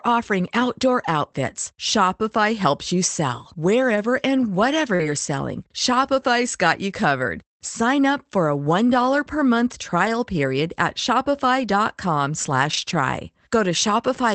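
Right after "helps you sell", at 3.95 to 3.97 s, there's the first lost packet rebuilt from error correction. A packet went missing, but the next one carried a low-bitrate copy, so there's no gap. That 20 ms just sounds a bit rougher and noisier before "and whatever".

Just past "and whatever", from 4.95 to 5.01 s, comes a short concealed packet loss. About 40 ms never arrived in time, so the decoder stretched out the preceding sound to bridge it. You hear it as a quick smear or wobble rather than a dropout.

Overlapping that, from 4.99 to 5.09 s, the same error-correction rebuild kicks in again for 60 ms. Then it happens at 6.01 to 6.07 s, at 10.05 to 10.07 s (between "per month" and "period at"), and at 11.59 to 11.61 s. The longest stretch is 12.69 to 12.95 s, about 140 ms rebuilt in total. Each time it's that grainier, lower-fidelity patch rather than a hole.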